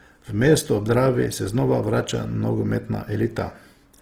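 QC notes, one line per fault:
Throughout: Opus compression, likely in its music (CELT) mode at a rate that fits about 16 kb/s. The speech sounds plainly grainy and rough because starved bands are filled with folded or noise content. A spectrogram shows full-band energy up to 20.2 kHz with few holes, but smeared and noisy.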